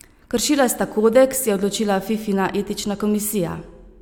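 No technical faults are audible anywhere in the speech recording.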